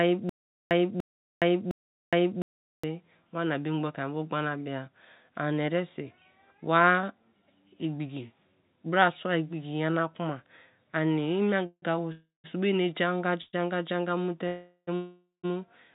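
Stutter with silent gaps runs from 0.00 to 2.84 s and is already under way when the audio begins. A fragment of about 0.29 s plays, then about 0.42 s of dead digital silence follows, repeating every 0.71 s, three times in all. This is likely a stalled player or stream replaying its last buffered piece on each retry and then running dry. The sound that belonged in that stretch never arrives.

Call audio freezes occur at 11.66 to 11.84 s, 12.12 to 12.46 s, 13.42 to 13.55 s, 14.47 to 14.89 s, and 14.95 to 15.45 s. At each one, the last sound is drawn out as a fading buzz or hiss that sinks to silence before the audio resumes. The stretches last roughly 0.11 to 0.48 s, with the silent tails running from 20 to 170 ms. This is likely late packets emptying the call's jitter buffer. Nothing is lost: the audio picks up where it stopped, just later. The narrow band, with nothing above 4 kHz, fits G.711 mu-law at 64 kbps.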